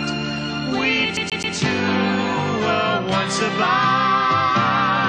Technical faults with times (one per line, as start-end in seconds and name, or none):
1.17-1.56 CD stuck on one turn